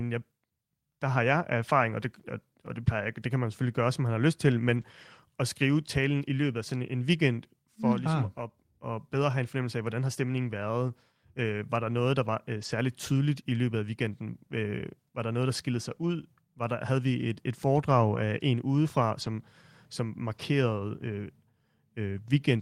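At 1.89–1.91, 4.69–4.83, 10.61, 12.57–12.67, 18.15–18.17, 19.21–19.27 and 20.33–20.39 s, a lost packet was rebuilt from error correction. The following packet carried a low-bitrate copy that the decoder played, so the speech turns briefly rough and noisy instead of dropping out. The longest, about 80 ms, falls between "man har lyst til" and "at skrive talen i".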